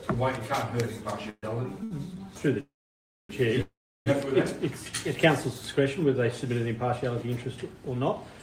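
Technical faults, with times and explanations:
1.29–1.45 s, 2.60–3.31 s and 3.61–4.08 s, call audio freeze: Each time, the sound stops moving forward. The last sound is held as a brief buzz or hiss that fades out, then goes quiet. The quiet parts last about 40 ms, 600 ms and 340 ms. The gaps are 133 ms, 689 ms and 446 ms long. The likely cause is packets held up in transit, so the jitter buffer ran empty. Playback then resumes where it stopped. Nothing is lost, but each gap adds to the delay.
1.84–1.93 s, short stall from a late packet: For 72 ms, one sound is held too long, with a slight buzz or dip. A packet missed its playout time and the jitter buffer ran dry. The receiver kept stretching the last sound until the packet arrived. It then carried on from the same place. No audio is missing. The sound is simply pushed 72 ms later.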